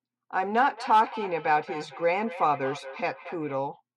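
From 0.59 to 3.56 s there's feedback echo between two devices: a second device on the call replays the speech into the mic, which no canceller catches. Each word returns about a fifth of a second later, peaking about 15 dB below the speech.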